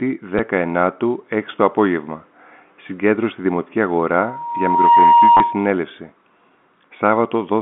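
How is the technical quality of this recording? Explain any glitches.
The recording has two kinds of glitch: brief packet-loss stutters and a loud feedback squeal. It travels over a telephone line with G.711 coding, so the sound is limited to about 200 Hz to 3.5 kHz.

Packet loss with the last packet repeated occurs at 0.38 s and again from 5.37 to 5.40 s. Audio went missing, and the receiver filled each gap by replaying the most recent chunk. The first gap is 10 ms long. The second lasts 30 ms, which points to three consecutive 10 ms packets. The single repeat gives a small blip. The longer gap gives a short, robotic stutter.

Loudspeaker feedback squeal runs from 4.19 to 5.75 s. A microphone picked up the loudspeaker it was feeding. At 943 Hz the loop gain went above one. That tone then fed on itself. It swells over roughly three quarters of a second into a steady whistle. It sits a few dB above the speech and dominates this stretch. 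The second packet-loss stutter falls inside the squeal.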